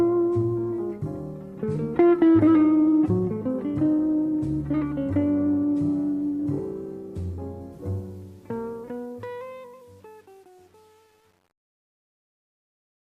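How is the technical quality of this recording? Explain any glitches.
The quality is held back by two faults, one at the start and one across the closing fade.

Adaptive stream starting at a low bitrate, 0 to 6.0 s: the player began on a low-bitrate version of the stream, then switched up once it had gauged the connection. Until 6.0 s the treble is missing or synthetic and codec artefacts are stronger, which fits about 32 kbit/s. Quality then jumps without a gap, consistent with roughly 64 kbit/s.

Truncation distortion on a fade, 7.73 to 13.17 s: a digital fade stage kept too few bits, which fits a 9-bit stage, and added no dither. As the level drops toward the smallest step, the waveform collapses into coarse square steps. The quiet tail sounds gritty, worst from 8.76 s to the end.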